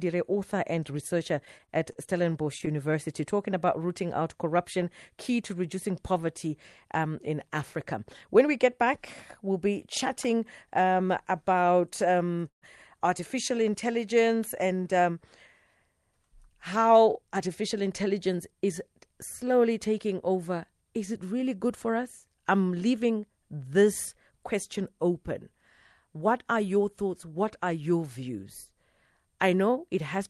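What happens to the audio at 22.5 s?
Nothing goes wrong at 22.5 s: the speech passes through intact, carrying only the ordinary coding character of the call path it travelled through.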